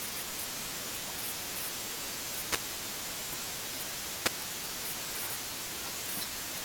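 Wireless microphone noise hits occur at 2.44 to 2.62 s and 4.23 to 4.30 s. Each time, the analogue FM radio link briefly fades as reflected signals cancel. Receiver noise surges over the speech as a short swish of static, the first lasting about 0.18 s, the second about 0.07 s.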